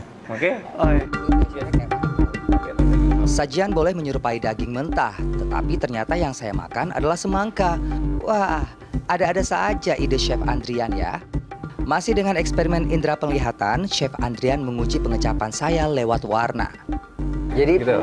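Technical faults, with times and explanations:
No technical faults can be heard anywhere in the recording.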